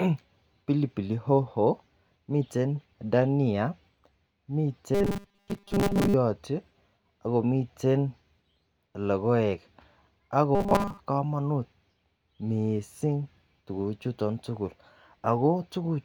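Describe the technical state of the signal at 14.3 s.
At 14.3 s the speech signal is intact, with no technical fault present at that moment.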